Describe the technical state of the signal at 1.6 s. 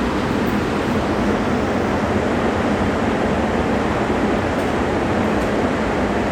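At 1.6 s the signal is intact, with no audible fault at that point.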